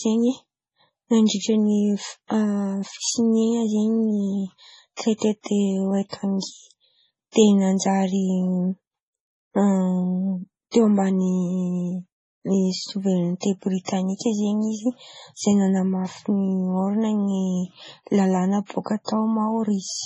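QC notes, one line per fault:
Throughout: MP3 compression. The speech sounds watery and swirly. Sibilants come out with a metallic, chirping edge, and consonant attacks smear. Nothing is present above 10.1 kHz, so the top end is dull and closed in. The likely cause is heavy MP3 encoding at a very low bitrate, around 24 kbps. Short of bits, the encoder cut the treble at a fixed frequency and dropped weak spectral lines that flicker in and out from frame to frame.
13.85–13.88 s and 19.05–19.08 s: pre-echo. At both points a hiss leads into a sharp onset, about 37 ms ahead of it, and the attack itself sounds softened rather than crisp. A transform codec spreads its quantisation noise evenly across a whole block. Here a strong onset fell late in a block, so noise scaled for the loud part also filled the quiet stretch just before it.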